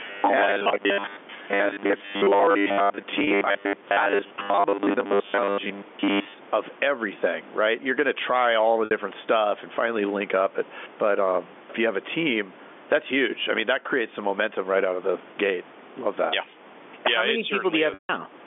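The level swells and ducks by about 10 dB all the way through; that gain pumping likely comes from gain set too high feeding a fast limiter. From 0.01 to 6.34 s, ending just before "of everything right", the speech has a rigid metallic 100 Hz buzz. This robotic sound from repeated short buffers is likely caused by most of the audio being replaced with repeats of the last 10 ms. At 3.24 to 3.27 s a held buzzy note bridges a 30 ms gap. A 60 ms gap at 8.85 to 8.91 s, between "to try all the" and "stuff and finally link", fades into silence. At 17.94 to 18.09 s a 150 ms gap fades toward silence before the speech cross-fades back. All three are packet loss with pitch repetition, where the receiver repeats the last pitch period to cover the missing audio.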